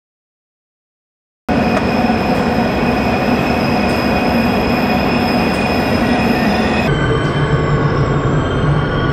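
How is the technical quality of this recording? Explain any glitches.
The technical quality is compromised by two glitches, one at each end.

The first is a cut-off start. The clip opens with digital silence until 1.49 s. The sound then begins abruptly, already in progress, with no natural attack or fade. Capture clearly began after the sound had started.

The second is a section at the wrong speed, from 6.88 s to the end. Playback runs at 0.611 times normal speed. Pitch and tempo drop together, roughly ten semitones lower, so the sound turns deep and sluggish. The likely cause is this stretch being clocked at the wrong rate.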